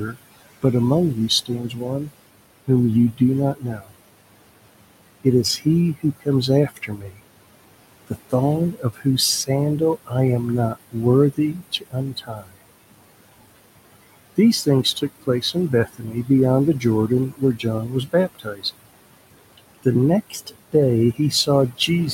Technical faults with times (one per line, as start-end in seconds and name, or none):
0.00-22.14 noise suppressor artifacts
0.06-2.10 speech cut by the noise suppressor
2.67-3.93 speech cut by the noise suppressor
5.24-7.20 speech cut by the noise suppressor
8.07-10.13 speech cut by the noise suppressor
10.75-12.60 speech cut by the noise suppressor
14.36-18.90 speech cut by the noise suppressor
19.58-22.14 speech cut by the noise suppressor